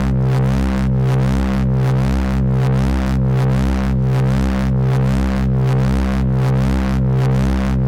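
No technical faults can be heard anywhere in this recording of sounds. Nothing in it breaks off, jumps or goes wrong at any point.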